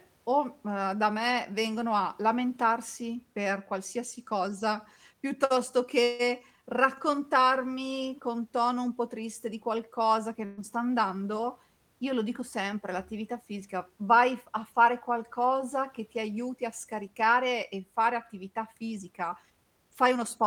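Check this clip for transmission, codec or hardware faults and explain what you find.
Three transmission faults can be heard in this speech clip.

From 6.03 to 6.22 s there is a call audio freeze. The last sound is stretched into a fading buzz or hiss for about 158 ms, and then speech resumes exactly where it stopped, with nothing lost. This likely comes from delayed packets draining the jitter buffer. Unlike packet loss, it only adds delay.

From 10.45 to 10.60 s there is a burst of packet loss. The last sound, held and fading, fills about 121 ms, and when speech returns roughly 120 ms of it has been skipped. That jump forward is what separates this from the earlier freeze.

From 18.96 to 20.39 s there is a jitter buffer speed-up. The receiver trims small pitch-period pieces, about 150 ms in total, to shrink an overfull buffer. Speech runs at 110% speed and sounds hurried, but the pitch does not rise as it would with simple fast playback.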